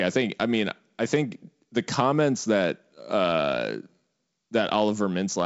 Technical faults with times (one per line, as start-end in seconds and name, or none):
none